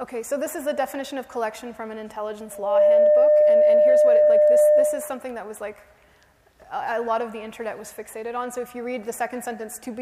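From 2.51 s to 5.27 s a steady, piercing tone at 602 Hz swells up within about a third of a second and then sits well above the rest of the audio, roughly 15 dB louder, before stopping. This is loudspeaker feedback squeal. The microphone was picking up the loudspeaker it was feeding, and at 602 Hz the loop gain went above one, so that frequency reinforced itself on every pass.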